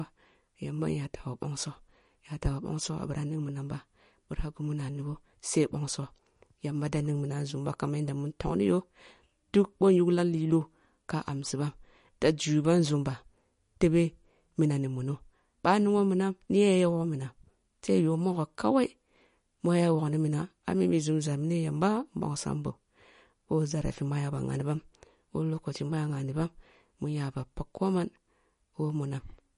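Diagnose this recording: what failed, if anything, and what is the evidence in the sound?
Codec stage, throughout: plainly audible MP3 compression damage, likely from a low-bitrate MP3 encode. Nothing is present above 10.6 kHz, and sibilants sound watery and chirpy as weak frequency lines switch on and off between frames, which fits a bitrate near 40 kbps.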